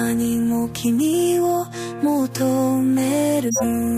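From 3.44 to 3.64 s, a corrupt frame decoded event puts a harsh, chirpy burst of noise peaking around -5 dBFS into the sound. A few consecutive compressed frames arrived with damaged bits, and the decoder played them anyway, scattering energy at wrong frequencies. It is garbage rather than a smooth concealment fill.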